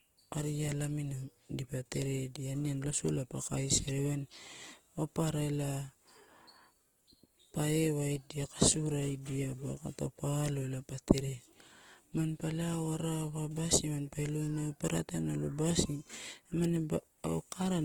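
From start to finish the speech carries Opus compression damage, plainly audible: the top end stays fullband, but the fine detail turns rough and grainy, with a noisy texture over voiced sounds. This is likely the codec's music mode running short of bits, which fits a rate near 16 kbps, refilling starved bands with noise or folded copies of lower ones. That refilling is what separates it from MP3: there are fewer swirling, watery holes, mostly pervasive graininess.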